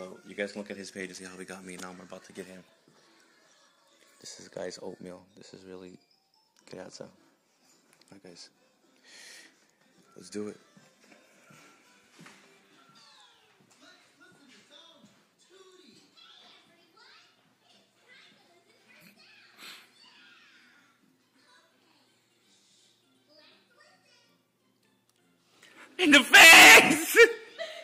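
Nothing is technically wrong with this audio.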